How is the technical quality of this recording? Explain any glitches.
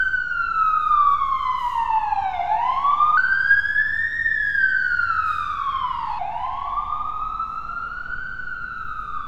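There's one clear glitch. From 3.17 to 6.19 s, a section at the wrong speed runs 1.22 times fast, pitching everything up about three semitones, likely from playback on a mismatched clock.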